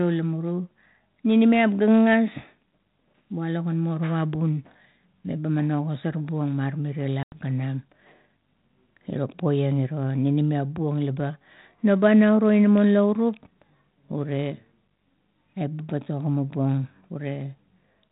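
Speech over a G.726 ADPCM link at 32 kbit/s, band-limited below 4 kHz. Packet loss on the ADPCM call hits between 7.23 and 7.48 s. About 90 ms, roughly ten packets, drops to a hard-edged silence. The decoder's predictor and step size lose track of the sender, so the speech comes back with brief distortion before settling.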